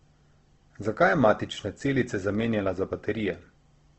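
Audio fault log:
Throughout, Opus compression: the speech sounds grainy and rough, with a noisy texture instead of the swirly holes you'd get from MP3. Nothing comes through above about 8.1 kHz, so it's band-limited to wideband. The cause is likely the music-style CELT mode starved of bits, filling thin bands with noise or folded copies of lower ones, and the damage fits a low rate around 16 kbps.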